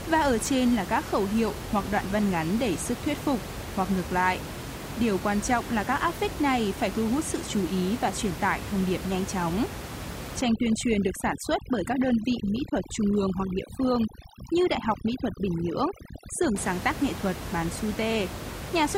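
Overdone noise removal runs from 10.41 to 16.56 s, ending just before "sáng tác nghệ thuật". A noise reducer pushed too hard cuts frequency bands near its noise estimate, taking quiet parts of the speech along, so the background drops and breaks up into twinkling specks.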